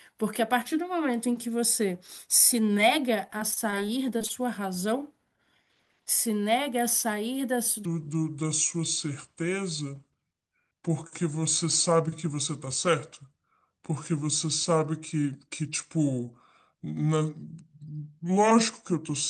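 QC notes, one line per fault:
3.27–4.31 s, repeated packet loss (robotic sound): ten short dropouts, none longer than 23 ms, were each patched by stretching the preceding sound, about 160 ms of fill covering 15 % of the stretch, so the speech turns choppy, with fragments missing.
7.85 s to end, section at the wrong speed: from here the speech plays at 0.728 times its original rate, likely from playback locked to the wrong clock, so speed and pitch fall together, leaving the voice slow, dragging and about five semitones deeper.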